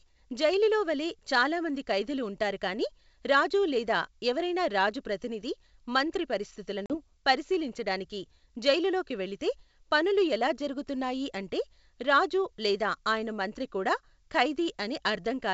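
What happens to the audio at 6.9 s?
Right around there, from about 6.86 to 6.95 s, there's packet loss on an ADPCM call: roughly 40 ms of the speech drops out, which suggests a couple of packets went missing. The gap is filled with silence and has hard edges. Because ADPCM decoding depends on its running predictor and step size, the decoder loses sync with the sender across the hole. When the speech returns, you hear that mismatch as a brief glitch, with a bit of distortion, until it settles. The G.722 coding itself is running at 64 kbit/s.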